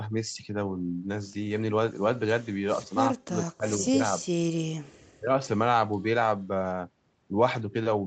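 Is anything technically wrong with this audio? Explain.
Yes. Two kinds of fault affect this speech.

Echo leak occurs at 2.88–2.96 s and 5.92–6.04 s. A faint, delayed copy of the speech returns about 455 ms late, roughly 30 to 35 dB below the main level. The far end's echo canceller likely let loudspeaker sound back through its microphone. Each scrap is short.

Speech suppressed in double talk occurs at 3.23–4.40 s and 5.17–5.37 s. The speech is turned down, dropping by as much as about 40 dB. Around 0.7 s is lost in the first span, and about 0.15 s in the second. Both sides were likely talking at once, and the echo canceller turned the talker down along with the echo.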